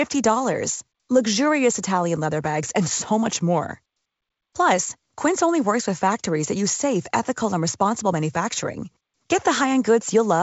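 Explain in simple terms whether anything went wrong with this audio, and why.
Nothing went wrong anywhere in this recording.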